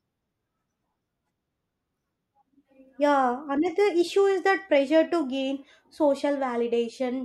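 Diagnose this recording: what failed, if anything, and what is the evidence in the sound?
No fault can be heard.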